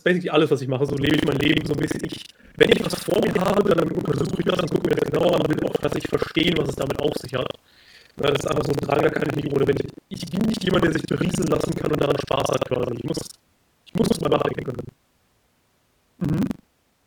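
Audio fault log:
0.85 to 17.06 s, buffer tearing: just after "alles was ich mache" a steady robotic rattle at about 23 Hz sets in and lasts to the end, present only while there is sound. The writing program and the reading hardware have drifted so they cross inside every period, which fits a 2048-sample buffer. Each period then carries roughly a third of stale audio, about a tenth of a second old, spliced in with hard joins on both sides.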